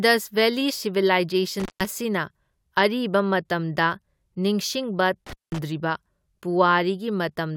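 Intermittent contact at 1.60–1.86 s and 5.26–5.59 s: a loose connection opens for about 0.15 s and 0.19 s, cutting the speech to faint hiss between crackles, seen as near-flat waveform gaps bounded by broadband spectrogram spikes.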